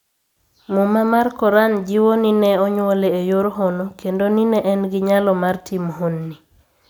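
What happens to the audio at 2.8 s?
Nothing goes wrong at 2.8 s; the speech continues intact through that moment with no dropout, click or distortion.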